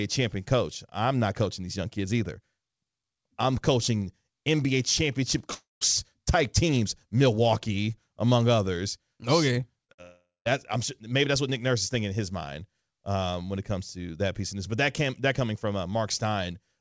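Speech heard through a call link, with nothing above 8 kHz, which fits a wideband codec such as G.722, and several gaps clustered around 10 s. What sounds like a long network dropout, likely caused by the connection stalling, hits twice. At 5.54 to 5.83 s, just before "type teams", a fading fill smears the spectrogram for about 0.27 s, ending in roughly 0.15 s of flat waveform. At 10.02 to 10.47 s, ahead of "I'm sure maybe that's", about 0.43 s is filled and about 0.14 s is dead silence. A short concealed packet loss at 9.85 to 9.91 s shows as a smeared, repeated slice of about 40 ms. A burst of packet loss follows at 9.93 to 10.00 s: about 60 ms are missing, and the waveform shows a held fill decaying in level.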